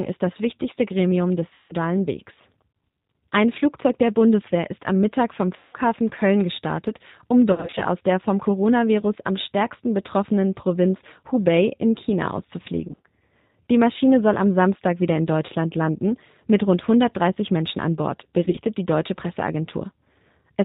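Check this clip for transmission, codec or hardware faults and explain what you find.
Yes, there's a couple of things going on in this speech clip. Throughout, it's running through the G.729 codec, plainly audible: an 8 kbit/s pitch-and-filter rebuild that cuts everything above 4 kHz and leaves the voice rough and synthetic.

Then there's VoIP packet loss concealed by the speech codec at 1.54–1.75 s, 5.56–5.76 s, 7.52–7.85 s (between "gestartet um" and "aus der vom"), 12.88–13.01 s, 15.47 s (between "wieder in" and "landen mit rund") and 18.45–18.59 s (before "die deutsche"). The decoder stretches its last pitch and filter into a fading buzz or coloured noise, lasting up to 170 ms. After each gap, it takes a moment to recover.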